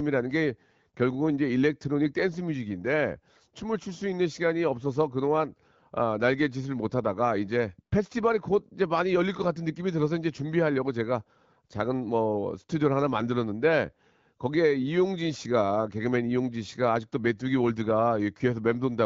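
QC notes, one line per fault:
No faults heard in this speech clip.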